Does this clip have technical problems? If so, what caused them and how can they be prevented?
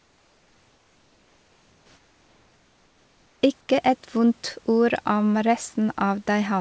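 Yes. From 0.00 to 3.42 s, and again from 3.61 to 3.69 s just before "et vondt ord om", the room background gives way to a flat, featureless hiss, about 3 dB and about 1 dB quieter. This is comfort noise in place of the background, likely from discontinuous transmission gating the pauses. Disabling DTX on the sender would prevent it.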